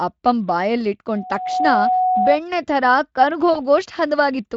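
From 1.15 to 2.39 s a loudspeaker feedback squeal rings at 738 Hz. Unlike a steady interfering tone, it swells over about half a second until it sits a few dB above the speech.

At 3.53 to 3.61 s, VoIP packet loss concealed by the speech codec fills a short gap, likely one lost 20 ms frame, with a fading extrapolated sound rather than silence. The speech stays weak briefly afterwards as the decoder recovers.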